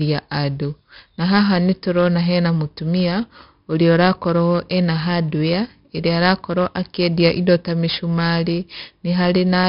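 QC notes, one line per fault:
Throughout: 4-bit ADPCM compression, heavy, with gritty hiss tracking the loud speech from coarse 4-bit steps, and nothing above 5.3 kHz, fitting a 44 kbps stream.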